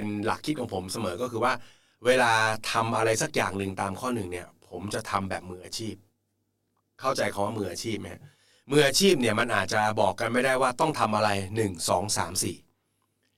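From start to finish the speech carries a channel delay, producing comb filtering: one channel arrives roughly 20 ms behind the other, and when the two are summed to mono the shared content cancels at regularly spaced frequencies, starting around 30 Hz. The voice sounds rough and slightly doubled throughout. On a spectrogram this shows as fixed dark horizontal stripes, evenly spaced notches that stay put however the speech moves, while the waveform looks smeared rather than crisply transient.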